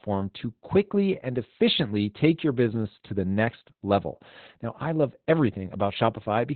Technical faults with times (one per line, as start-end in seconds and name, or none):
0.00-6.55 Opus voice compression